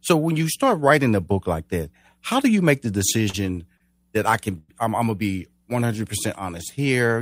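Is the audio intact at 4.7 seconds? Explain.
No. After "that I can", 4.58 to 4.70 s fills with a fading buzz or hiss before "I'm I'm gonna be" resumes, nothing lost. This is a call audio freeze, likely from delayed packets emptying the jitter buffer for 103 ms.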